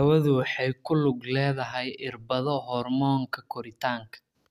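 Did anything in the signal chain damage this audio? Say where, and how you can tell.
No, nothing in the signal chain damaged this audio, and there is nothing to point to at any stage.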